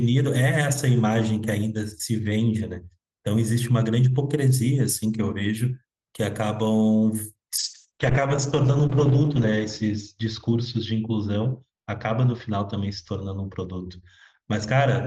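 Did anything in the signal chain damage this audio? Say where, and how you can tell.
Yes. From 7.63 s to the end, the speech turns rough and watery and loses its top end, narrowing from 20 kHz to 8 kHz. This is a call bitrate drop: falling bandwidth estimates pushed the Opus encoder from 32 to 9 kbps, its lowest for 1.9 s.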